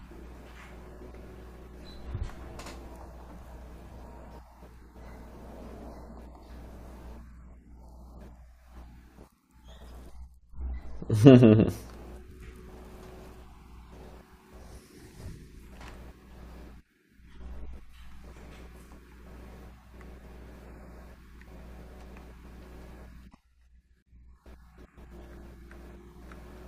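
Nothing technical stands out in this speech recording: there are no dropouts, glitches or other faults to point to anywhere in it.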